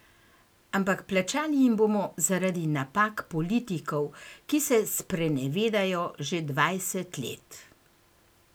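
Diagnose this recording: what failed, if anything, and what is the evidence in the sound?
No fault detected anywhere.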